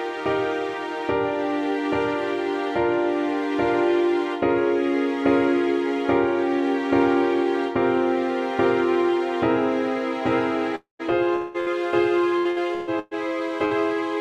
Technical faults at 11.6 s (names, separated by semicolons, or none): long network dropout; burst of packet loss